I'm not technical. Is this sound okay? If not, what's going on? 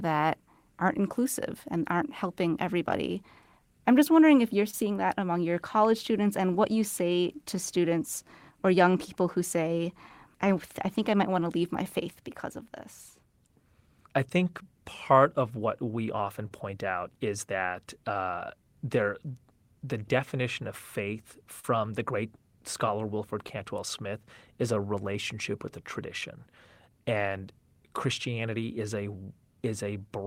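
No. There is clock drift between sender and receiver: the sending side's clock runs roughly 2% slow, so the receiver keeps adjusting timing to stay in step.

Those repeated timing corrections run from 0.73 s to 30.09 s. The receiver plays the speech at 98% speed, stretching it by about half a second overall, which may sound slightly unsteady.

At 4.70–4.74 s there is a short stall from a late packet. The sound is held for 29 ms while waiting, heard as a tiny buzz or dip.

Scattered short gaps appear around 9.68–10.60 s (about three, each very brief) and 16.25–26.23 s (about seven, the longest around 40 ms). The system fills each one with a short continuation of the previous sound, heard as brief ticks or smears.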